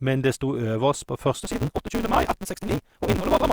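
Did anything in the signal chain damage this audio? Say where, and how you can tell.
Yes, a block size mismatch (truncated) in the buffer stage. From 1.42 s, speech runs 1.88 times fast with its timbre intact, under a 188 Hz buzz. Block tails are dropped, consistent with 256-sample reads.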